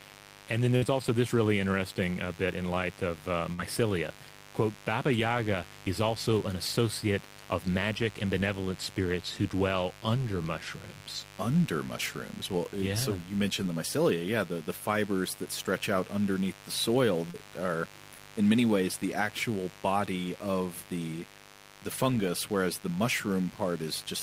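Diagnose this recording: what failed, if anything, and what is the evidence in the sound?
Mains buzz runs under the whole recording, a steady raspy buzz built on 50 Hz harmonics and sitting roughly 20 dB below the speech. This is an analogue wiring fault: a dimmer, rectifier or poor shielding is injecting switching spikes twice per mains cycle.

A burst of packet loss, a network fault, occurs at 0.76 to 0.85 s, just before "also this really interesting", and again at 3.54 to 3.61 s. Each time the receiver continued the last sound and faded it for around 50 ms, then jumped ahead, dropping about 40 ms of speech.

Short concealed packet loss, also on the network side, appears at 17.30 to 17.37 s, between "out underneath the soil" and "are in many ways", and at 18.14 to 18.21 s, before "in many ways the". The decoder extrapolated the missing 40 ms, leaving a brief smear.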